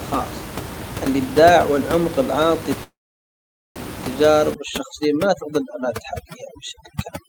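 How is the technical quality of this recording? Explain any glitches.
The recording has two clear faults, with room noise sitting about 11 dB below the speech.

From 2.83 to 3.79 s there is a call audio freeze, likely from delayed packets emptying the jitter buffer. A brief fading buzz or hiss drops into about 0.83 s of silence, then speech resumes intact rather than skipping ahead.

From 4.54 s to the end, overdone noise removal strips bands near the noise estimate, leaving a lowered background broken into twinkling specks, unlike plain room noise.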